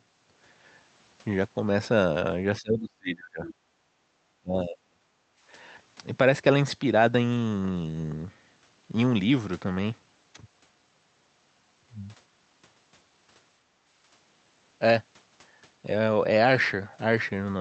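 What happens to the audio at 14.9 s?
Nothing goes wrong at 14.9 s: the speech passes through the call path intact, with only the ordinary coding character of a call codec.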